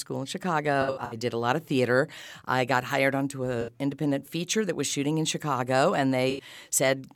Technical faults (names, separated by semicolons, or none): AAC frame loss with concealment